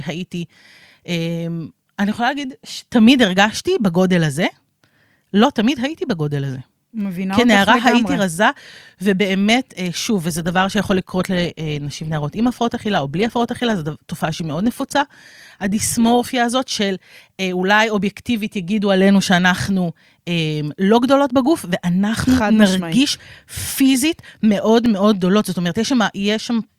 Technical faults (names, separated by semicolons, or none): adaptive stream at a lower bitrate; block of digital silence